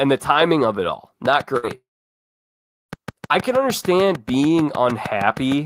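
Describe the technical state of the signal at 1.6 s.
At 1.6 s the signal carries two overlapping faults.

A burst of packet loss runs from 1.57 to 1.65 s. Packets arrived too late or not at all. The receiver concealed the gap by extending the last received sound for about 58 ms, attenuating it as it went, which produces a held buzz or fading hiss in place of the speech. Playback then resumes roughly 60 ms further along, so that stretch of speech is skipped outright.

Underneath this, a train of clicks starts at 1.26 s and continues to the end at 5.66 s. The pulses are alike in shape and arrive at a steady 6.55 per second, peaking around 10 dB above the speech. They sound like regular ticking laid over the speech and through its pauses, likely caused by interference from nearby equipment or a faulty connection or power supply.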